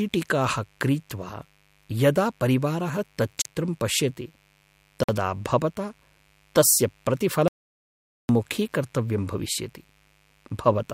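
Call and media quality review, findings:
Mains buzz, throughout: switching spikes from a dimmer, rectifier or unshielded run entering the chain on a 50 Hz supply, twice per cycle. Steady raspy buzz under the speech, harmonics reaching into the kHz range, about 40 dB below signal.

Bluetooth stall, 3.42–3.45 s and 5.03–5.09 s: headphone buffer likely ran dry while interference held packets for resend. Playback cuts to silence for 36 ms, then 51 ms.

Audio dropout to silence, 7.48–8.29 s: input likely lost through disconnect, link failure or stray mute, encoder writing silence. Speech stops mid-flow, 0.81 s of silence with no room tone, content in that span gone.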